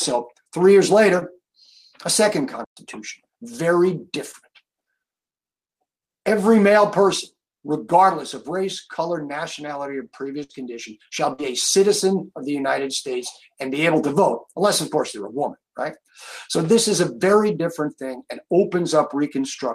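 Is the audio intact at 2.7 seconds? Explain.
No. A playback stall runs from 2.64 s to 2.77 s, so the output drops to silence for about 120 ms right across the 2.7-second mark. The sound halts abruptly mid-flow, leaving a clear gap, and then carries on. The likely cause is that the player's buffer ran dry or its playback thread was briefly blocked, so nothing reached the output until the data supply recovered and playback resumed.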